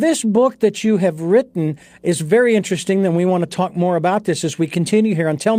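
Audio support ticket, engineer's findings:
Clock drift between sender and receiver, whole clip. Sender clock runs about 3% slow. Jitter buffer keeps draining; receiver must pad playback to stay in step.

Repeated timing corrections, 0.04 to 4.97 s. Small repeated pieces at uneven intervals, tempo at 97%. Adds around 150 ms overall.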